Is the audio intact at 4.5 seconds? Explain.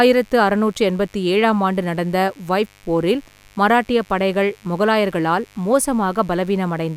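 No. At 4.5 seconds, as throughout the clip, mains buzz is present: switching spikes from the 50 Hz supply leak into the signal path twice per cycle, spreading harmonics up to several kHz. The result is a steady, raspy buzz about 35 dB below the speech.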